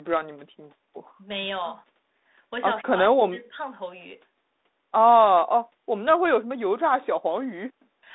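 No technical faults occur at any point in this speech, so there is nothing to describe in time order.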